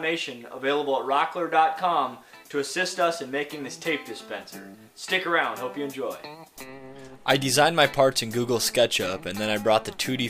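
No technical faults are audible anywhere in this audio.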